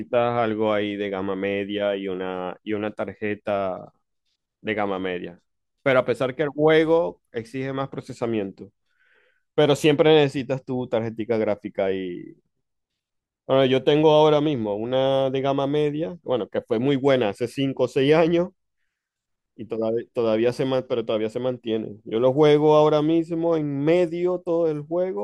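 No technical faults can be heard anywhere in the recording, with the signal holding steady and continuous throughout.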